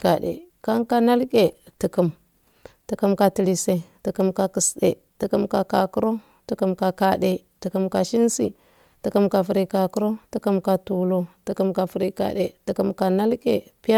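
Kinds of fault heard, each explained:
Bluetooth LC3 compression: plainly audible grainy, breathy codec damage on the speech throughout, likely LC3 transform coding; the artefacts fit 10 ms frames at about 48 kbps.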